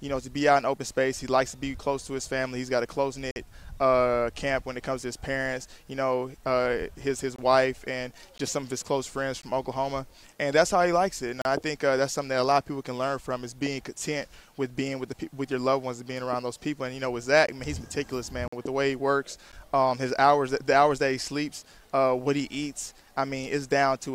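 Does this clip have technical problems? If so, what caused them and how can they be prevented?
Yes: gaps between stream segments, hard-edged silences of 11 to 50 ms at 3.31–3.36, 7.36–7.39, 8.38, 9.42, 11.42–11.45, 17.47, 18.48–18.53 and 19.52 s. The one-second spacing fits segment timestamps leaving holes the player fills with silence. Prevent this by aligning segment timestamps contiguously at the packager.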